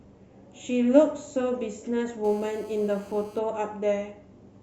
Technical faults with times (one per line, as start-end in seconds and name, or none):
2.25-3.39 GSM phone buzz